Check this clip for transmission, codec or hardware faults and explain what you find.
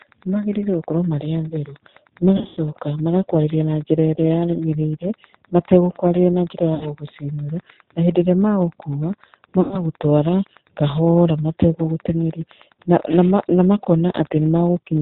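Three faults are present: Wi-Fi interference and G.729 codec damage run through the whole clip, and VoIP packet loss concealed by the speech codec breaks the speech three times.

Wi-Fi interference: a steady ticking about ten times a second, roughly 25 dB below the speech, is audible throughout. A nearby Wi-Fi radio's beacon, repeating every 102.4 ms, is rectified by the audio circuitry and leaks into the signal as regular clicks.

G.729 codec: the speech sounds dull, slightly rough and synthetic, with nothing above 4 kHz. The bandwidth and texture fit the 8 kbit/s G.729 codec, which rebuilds the voice from a vocal tract model and a handful of pulses per frame rather than sending the waveform itself.

VoIP packet loss concealed by the speech codec: at 2.37–2.60 s, just before "magakwarĩria na njĩra", the voice is stretched into a fading sound. About 160 ms of audio is missing, scattered over 200 ms with the longest gap 100 ms, which fits 20 ms packets. 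It happens again at 6.75–6.87 s, between "mategũkwarĩria na njĩra" and "gũgũcinũra na hĩndĩ", where about 60 ms is missing, and at 9.61–9.83 s, where about 100 ms is missing. The decoder extends its last pitch and filter state and turns the gain down frame by frame, so the sound weakens. It stays weak or distorted for tens of milliseconds or more after each gap.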